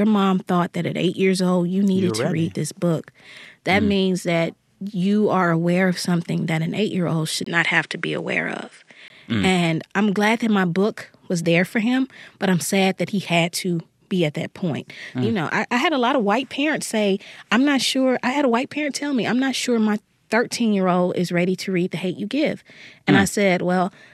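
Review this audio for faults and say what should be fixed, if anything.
Just after "eight year old should", from 7.44 s to 9.10 s, the speech turns duller, with nothing above 10.5 kHz, a brief 20 ms gap at the change, a faint new background hiss and no level jump. The likely cause is the input switched to a poorer device. Lock the recording input to one microphone and disable automatic device switching.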